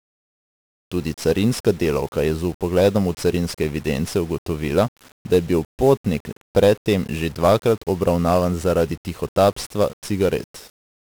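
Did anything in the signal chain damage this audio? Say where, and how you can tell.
Yes, at the codec: 1-bit DFPWM compression, consistent with roughly a 48 kbps stream, buries the speech in broadband fuzz and crackle, with treble lost under hiss throughout.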